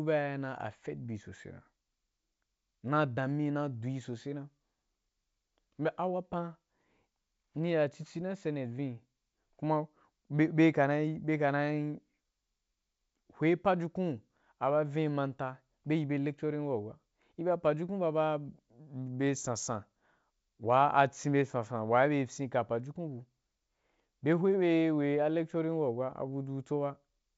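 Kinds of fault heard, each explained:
No faults can be heard in this speech clip. It runs through G.722 wideband telephone coding at 64 kbit/s, and any trace of that coding is faint at most.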